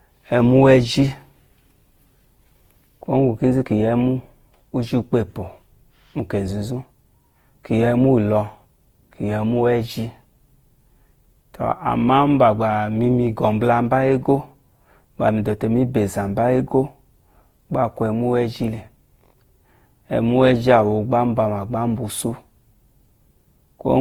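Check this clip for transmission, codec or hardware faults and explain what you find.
One codec fault runs through the whole speech clip. Generation loss, throughout: swirly, smeared, hollow sound with blurred attacks. It fits about five Opus passes near 48 kbit/s. Likely repeated re-encoding, each stacking new quantisation noise.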